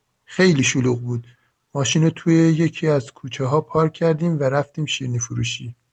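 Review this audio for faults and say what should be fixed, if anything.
Nothing stood out on listening to this speech, so there is nothing here that needs fixing.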